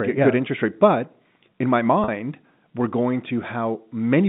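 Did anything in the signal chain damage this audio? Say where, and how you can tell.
Yes, at the network stage. From 2.04 to 2.08 s, right after "in my", the sound holds on a short, buzzy repeated tone: packet loss with pitch repetition. About 40 ms went missing, which fits two 20 ms packets, and the receiver looped the last pitch period to fill the gap.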